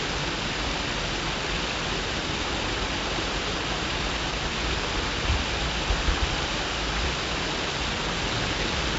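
4-bit ADPCM compression runs throughout: coarse predicted steps leave gritty hiss riding every loud sound, harsh attacks, and nothing above 7.7 kHz, which fits 64 kbps.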